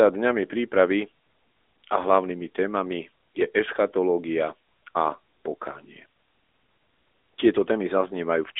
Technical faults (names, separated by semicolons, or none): AMR narrowband mobile codec